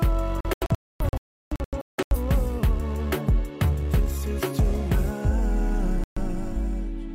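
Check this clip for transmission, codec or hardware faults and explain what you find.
Two digital broadcast dropouts. From 0.41 to 2.17 s, the receiver loses frames and mutes to silence in scattered holes totalling 1.19 s, the longest 0.34 s. From 6.04 to 6.22 s, there is 0.13 s of muting. The sound simply vanishes, with no smearing or repeated fragments as concealment would leave.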